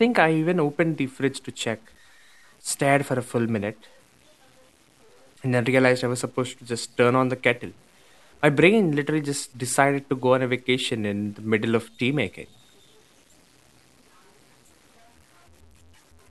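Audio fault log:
Throughout: low bit depth without dither; speech carries grainy, signal-following distortion about 35 dB down, likely from truncation to roughly 9 bits, so quiet sounds turn gritty.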